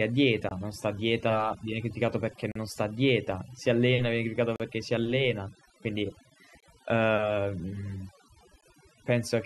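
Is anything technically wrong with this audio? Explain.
Yes, there are two faults. Throughout the speech, overdone noise removal has pulled individual frequency bands down wherever they sit near the estimated noise floor, leaving a lowered background broken into twinkling specks. A gap between stream segments occurs every 2 seconds, at 0.49–0.51, 2.52–2.56, 4.56–4.60, 6.60–6.63 and 8.61 s. Segment timestamps don't meet, so the player inserts hard-edged silences of roughly 14 to 39 ms without losing audio.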